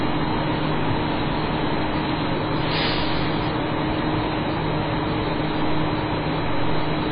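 An everyday sound recording, with heavy MP3 compression damage running through the whole clip. Nothing is heard above 5 kHz, so the top end is cut off flat. The remaining sound has a watery, swirling texture. Quiet details flicker in and out rather than holding steady. Sharp onsets lose their edge and smear. The damage likely comes from MP3 encoding at a very low bitrate, fitting something near 16 kbps.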